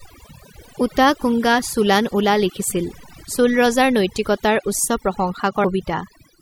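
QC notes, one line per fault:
Throughout, overdone noise removal. The background sits at near silence, broken by small twinkling specks. A noise reduction stage was pushed too hard. It drives individual frequency bands down or off whenever they come close to its noise estimate. Quiet parts of the speech fall below that line and vanish along with the noise. What remains flickers from band to band.
1.22 s and 5.63 s, damaged data in a compressed stream. Each is a short blip or chirp, well under 20 ms long. The first comes just before "চোলান উলা লিখিছিল চোল". Part of the compressed stream was corrupted at these points. The decoder misread those frames and lost sync, then hunted for the next valid frame header. The garbled output makes the chirp.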